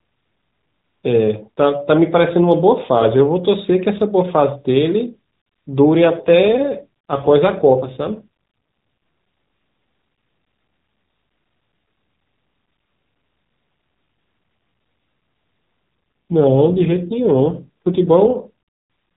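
From 5.98 to 8.27 s and again from 16.31 to 18.36 s, the speech turns rougher and more synthetic, with no gap and no change in bandwidth. These are AMR rate drops: the mobile codec falls back from a rate consistent with 12.2 kbps to one consistent with 5.9 kbps, spending bits on error protection instead, then recovers.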